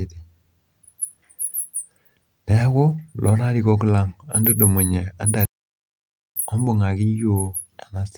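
At 5.45 s, after "lang entudumunye", the player likely ran out of data and a playback stall followed, so the speech cuts to silence for 0.91 s before resuming at 6.36 s.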